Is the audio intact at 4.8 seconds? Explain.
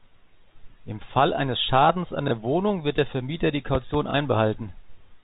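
Yes, the audio is intact at 4.8 seconds, with nothing there but the speech carried through its ordinary G.711 telephone coding.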